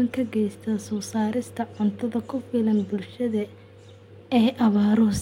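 No technical faults can be heard in this speech clip.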